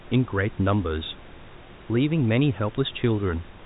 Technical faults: none

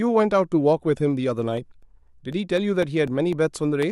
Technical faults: periodic USB or driver dropouts

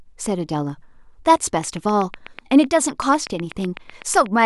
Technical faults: train of clicks

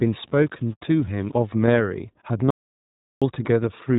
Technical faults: iLBC codec; low bit depth without dither; lost iLBC frames; audio dropout to silence

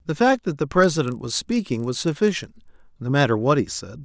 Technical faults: resampler restarted on every block

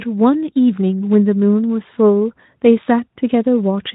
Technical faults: none

